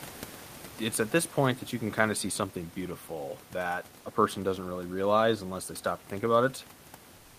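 From 7.15 s to the end at 7.38 s, after the speech stops, the room's background is replaced by comfort noise, likely from discontinuous transmission in an Opus encoder. The real room noise, about 25 dB below the speech, gives way to a steady, featureless hiss about 2 dB quieter. On a spectrogram the textured background turns into a smooth, uniform wash, and the waveform becomes a flatter, even band of low-level noise.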